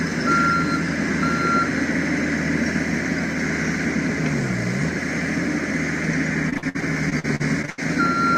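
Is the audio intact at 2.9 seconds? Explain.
Yes, at 2.9 seconds the audio runs through cleanly, with no dropout, click, distortion or other fault at that point.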